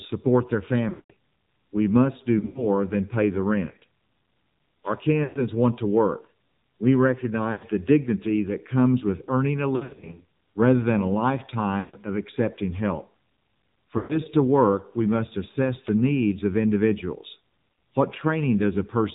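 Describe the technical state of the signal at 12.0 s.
Lost AMR speech frames end at 11.97 s, having begun at 11.80 s: about 140 ms of frames failed their radio checksum, so the decoder kept repeating the last good pitch and vocal-tract settings with falling gain. The sound stretches into a brief synthetic drone, fades toward silence, and returns weak or rough right around 12.0 s.

The AMR narrowband mobile codec is also plainly audible here and throughout. Its 8 kHz sampling removes everything above 4 kHz, and its sparse pulse-driven vocal-tract model gives a buzzy, synthetic edge that fits a low bitrate of around 7.4 kbps.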